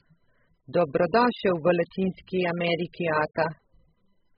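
From start to finish the speech has likely been through heavy AAC compression, with an AAC-LC encoder starved of bits so that it discards large parts of the spectrum, consistent with a rate near 8 kbps. Nothing survives above 5 kHz, so the sound is dull and boxed in. Too little detail is left in the bands below that cut-off, which gives sustained sounds and sibilants a smeared, warbling, fizzy texture.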